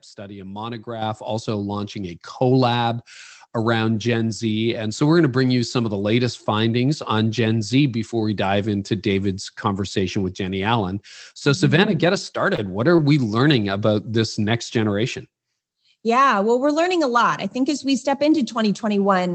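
At 1.02 s, just after "study a", and again at 2.04 s, after "also launching", the microphone volume steps up, by about 7 dB and then about 3 dB. Voice and background jump together, and the waveform envelope widens abruptly at each point.

At 12.32 to 12.36 s comes a short concealed packet loss. About 20 ms of audio never arrived, and the decoder extended the preceding sound to fill the hole, which is heard as a brief smear. On the spectrogram that stretch looks smoothed and repeated.

At 12.56 to 12.60 s there is a short stall from a late packet. The jitter buffer ran dry and the last sound was held about 18 ms longer with nothing lost. It comes across as a slight drag, with a stretched, flat patch in the spectrogram.

At 12.96 to 13.00 s a second concealed loss replaces about 20 ms with continued sound. Like the first, it shows a smeared, repeated stretch before the real audio resumes, within an Opus call path whose energy stops near 8 kHz.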